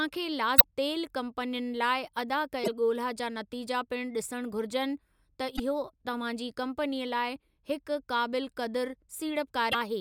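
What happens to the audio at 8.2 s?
Nothing goes wrong at 8.2 s; the speech continues intact through that moment with no dropout, click, distortion or other fault.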